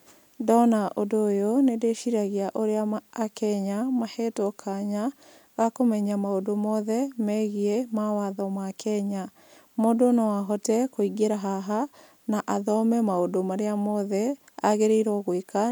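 Nothing goes wrong anywhere in this bit of speech; there's simply no technical fault to point to.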